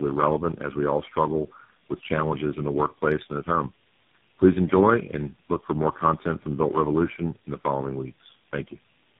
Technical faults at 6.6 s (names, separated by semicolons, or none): tandem speech coding